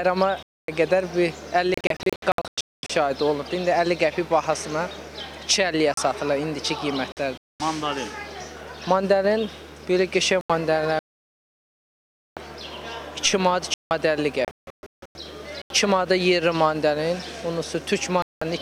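Right from the start there's video or display buzz under everything: a 75 Hz buzz, which points to a screen running at that field rate, with a layer of hash above it, sitting roughly 25 dB below the programme. Something on the picture side, a monitor or a video cable, is coupling into the audio path, and it never lets up across the clip.

At 0.43 s there's a block of digital silence lasting 256 ms. The sound snaps to silence and back with no fade, leaving a clear hole. That's most likely the output buffer not being filled in time.

At 1.74 s the first digital broadcast dropout arrives. The receiver loses good frames and mutes, and here it breaks up into several short holes scattered through to 2.90 s, the longest about 224 ms. Whatever was sent during those gaps is simply gone.

More digital silence follows at 5.94 s (34 ms) and 7.12 s (48 ms). Then a short dropout runs from 7.38 to 7.60 s. 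Another block of digital silence hits at 10.41 s (85 ms, which fits a 4096-sample buffer). The longest dropout comes straight after, a solid mute from 10.99 to 12.37 s.

There's a 171 ms block of digital silence at 13.74 s. A scattered dropout follows from 14.45 to 15.16 s, with runs up to 160 ms. Digital silence comes again at 15.62 s (85 ms). Last of all, a brief dropout runs from 18.22 to 18.42 s.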